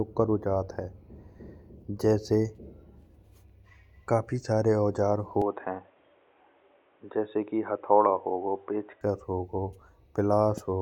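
The input likely switched to a poorer device at 5.42 s, so from then until 9.01 s the speech loses everything above 3.8 kHz and turns dull and boxy, with faint new background noise, no gap at the switch, and little change in level.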